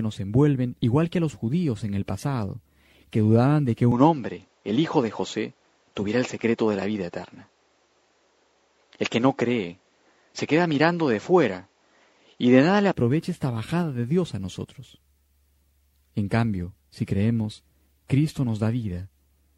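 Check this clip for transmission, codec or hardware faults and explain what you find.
One fault is present: a likely input switched to a poorer device. From 3.92 s to 12.94 s the sound loses its top end. Nothing reaches above 7.6 kHz. The change is abrupt at both ends, with no gap at either switch. A faint new background noise appears, well below the signal. The level hardly moves. This points to the system likely swapping to a narrower-band microphone or headset profile, then back. The sound turns duller and boxier, then clears again.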